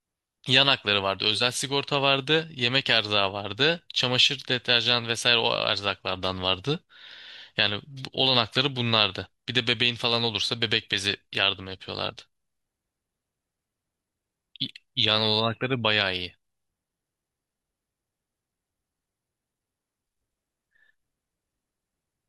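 A speech recording, with nothing technically wrong with it.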